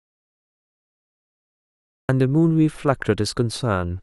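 The input feeding the recorder was likely cut off or muted from the very start, and the recorder kept writing silence until the signal returned at about 2.09 s. This is an audio dropout to silence: the first two seconds of the speech clip are dead silence with no room tone or hiss at all, and the speech then comes in abruptly mid-flow, with whatever preceded it lost.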